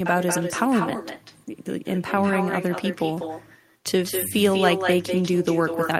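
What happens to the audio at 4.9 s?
At 4.9 s the speech still carries an echo with no canceller, as it does across the whole clip: the far end's loudspeaker feeds its microphone, so a thinner copy, about 6 dB down, trails every syllable by around a fifth of a second.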